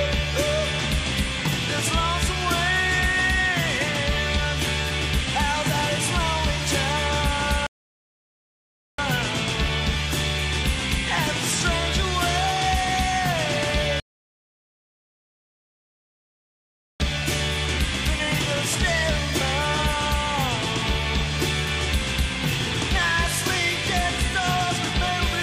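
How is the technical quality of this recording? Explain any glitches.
The recording is interrupted by two rebuffering stalls. The first runs from 7.67 to 8.99 s, adding about 1.3 s of silence, and the second from 14.0 to 17.0 s, a full 3 s gap. Each time the player drained its downloaded audio and simply waited for more, so the sound drops dead to silence and then picks up exactly where it left off. Nothing is skipped or repeated; the stalls just stretch the timeline.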